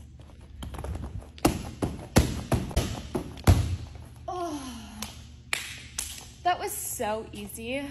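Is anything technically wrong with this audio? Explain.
Yes, there's one glitch. From about 2.71 to 2.78 s, roughly 70 ms, there's damaged data in the compressed stream. A short run of the encoded data got corrupted, so the decoder couldn't make sense of those frames, lost its place, and had to hunt for the next valid frame header before it could carry on. You hear it as a brief glitch that breaks the flow of the sound for that moment.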